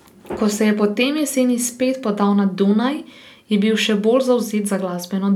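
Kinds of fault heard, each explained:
No kinds of fault are heard in this speech.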